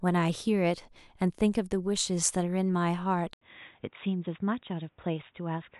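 At 3.33 s the input likely switched to a poorer device. After an 80 ms gap, the speech continues at about the same level but with nothing above 3.8 kHz, so it sounds duller and boxier, over a new, faint background noise to the end.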